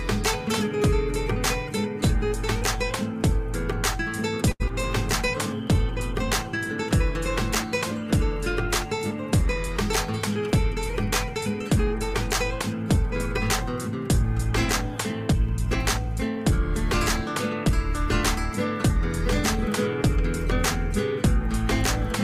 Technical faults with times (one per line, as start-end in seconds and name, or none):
4.51-4.62 short stall from a late packet
4.68-4.71 short concealed packet loss
9.68-19.00 jitter buffer speed-up